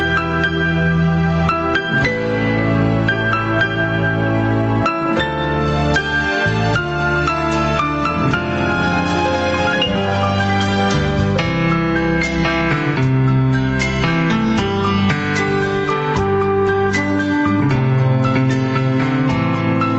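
Throughout, the level surges and ducks by around 10 dB, squashing loud and soft parts together. This gain pumping likely comes from a fast limiter reining in excessive input gain.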